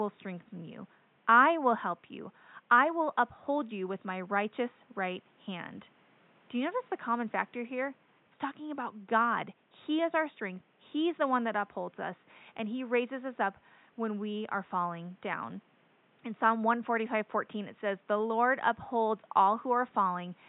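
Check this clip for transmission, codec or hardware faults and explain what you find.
No transmission, codec or hardware fault can be heard in the speech, and the only other sound is the room's own background noise, which sits about 37 dB below the speech and belongs to the recording rather than the system.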